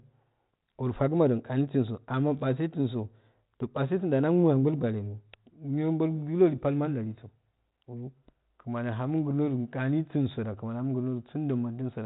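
No technical faults are audible.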